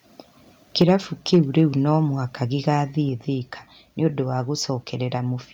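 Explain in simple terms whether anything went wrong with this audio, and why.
Something went wrong three times. The microphone's input was likely set too high, so the loudest moments pushed past what the recorder could capture. This is microphone overload. The tops of those peaks get sliced off, giving a harsh, crackly edge. It happens from 0.81 to 0.90 seconds, and again from 1.33 to 1.61 seconds, just before "no mũhaka". The second stretch is longer but milder, with fewer peaks cut off.

Right after the first overload begins, at about 0.82 seconds, the calling software appears to have reacted by turning the microphone down in a single jump: the microphone volume stepped down. Both the voice and the background suddenly become quieter at that moment, a drop that sticks around afterwards, directly following the distorted peak.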